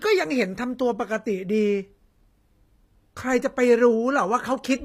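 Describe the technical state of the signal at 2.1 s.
At 2.1 s, as throughout the clip, the speech shows HE-AAC compression, likely at a low bitrate near 24 kbps: the treble is rebuilt by copying lower bands upward, so high harmonics misalign, s sounds turn gritty and metallic, and nothing remains above 15.5 kHz.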